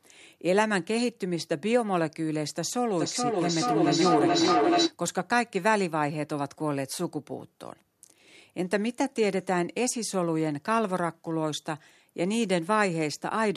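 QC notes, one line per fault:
2.96–4.98 s, feedback howl: a tone near 300 Hz builds over about two seconds until it sits roughly 3 dB above the speech, pulsing at around 0.4 s intervals. A microphone is picking up a loudspeaker carrying the same call, and each trip round that loop returns the sound louder than before. The repeats therefore grow rather than decay, narrowing to the pitch the loop favours, and the pulse follows the loop's delay until the loop is broken.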